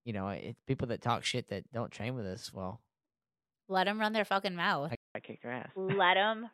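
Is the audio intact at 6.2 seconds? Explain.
No. At 6.2 seconds you're inside a stretch that runs from 4.95 s to the end, where it sounds like an input switched to a poorer device, likely a different mic or a headset call profile. Right after "their fucking mouth I" there's a gap of about 0.2 s, then the speech comes back dull and boxy, with nothing above 3.8 kHz. The level stays about the same, but a faint new background noise sits well under the voice.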